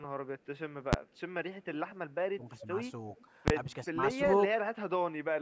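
What you've got is a short speech clip that's been through call microphone processing (nothing above about 8 kHz), and it has three kinds of trouble. First, invalid numbers at full scale: twice the output slams to maximum for one block, at 0.93 s and again from 3.48 to 3.50 s. The blocks are short enough, roughly 11 ms and 21 ms, which fits buffers of 512 and 1024 samples, that each one comes across as a single hard bang rather than a pop-gap-pop. Second, echo leak: a faint, delayed copy of the voice trails in from 1.64 to 1.92 s, 2.59 to 2.66 s and 3.18 to 3.25 s. It sits about 20 to 35 dB below the speech and lags by 365 ms, which is what you'd get if the far end's echo canceller likely let some of its loudspeaker pickup slip back down the line. Third, speech suppressed in double talk: the talker's level dips from 2.36 to 2.68 s, 3.88 to 3.99 s and 4.53 to 4.59 s, by about 10 dB in the first and last spots and about 25 dB in the middle one. 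That pattern likely comes from the canceller getting confused while both sides talked over each other and clamping down on everything. Note the 2.59 s echo sits right inside the first dip.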